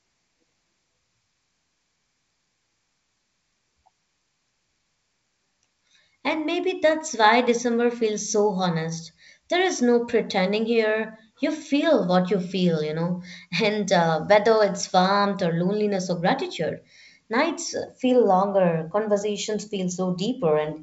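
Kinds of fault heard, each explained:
No faults can be heard anywhere in this speech.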